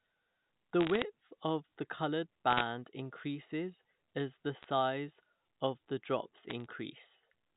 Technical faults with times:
0.81-1.02 bit errors on a digital phone line
2.50-2.62 bit errors on a digital phone line
4.63-4.68 bit errors on a digital phone line
6.50-6.66 bit errors on a digital phone line

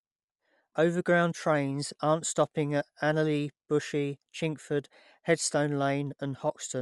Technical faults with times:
0.00-6.81 Bluetooth LC3 compression

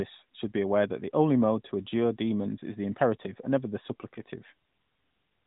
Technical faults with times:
none

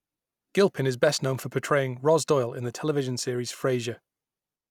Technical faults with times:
none

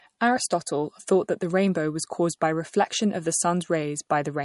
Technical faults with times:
0.00-4.45 MP3 compression

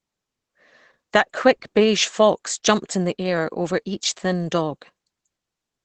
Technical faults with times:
0.00-5.84 Opus compression

